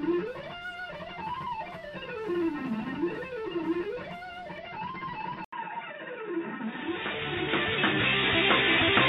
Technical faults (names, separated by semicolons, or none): input switched to a poorer device